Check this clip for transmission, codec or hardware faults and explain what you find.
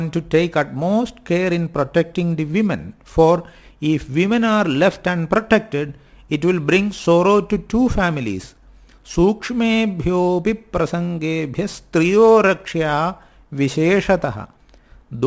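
One fault runs through the whole clip. Aliasing, throughout: the sound was resampled downward without an anti-alias filter, so content above the 8 kHz fold point reflects back into the audible band, which fits a drop to a 16 kHz rate. The mirrored energy, roughly 30 dB below the signal, adds gritty, metallic, inharmonic tones to sibilant and bright material, and the spectrum stays dense right up to 8 kHz.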